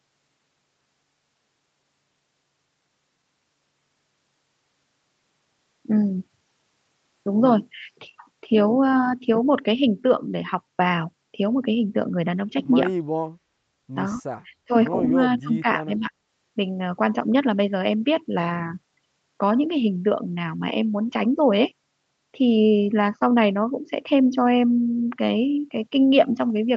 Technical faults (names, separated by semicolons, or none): speech suppressed in double talk